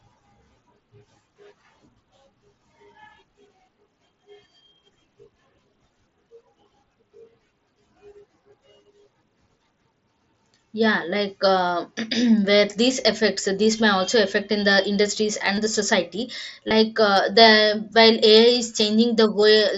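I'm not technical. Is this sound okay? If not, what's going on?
No. There is concealed Bluetooth headset packet loss at 15.55, 16.68 and 19.42 seconds. The phone briefly lost the headset's signal and filled each gap by repeating the last bit of speech. The first two gaps last about 20 ms and come through as a short buzz. The last one is nearly hidden.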